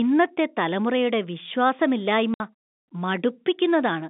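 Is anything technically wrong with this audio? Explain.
Yes. From 2.34 to 2.40 s the speech drops out completely for 60 ms. This is packet loss filled with silence: audio packets never arrived, and the receiver played silence in their place instead of attempting to conceal the loss. A 60 ms gap fits two 30 ms packets. The edges are abrupt. That hard-edged, silent hole sets it apart from a level fade or a concealment smear. The surrounding narrow telephone-band sound comes from the G.711 line itself.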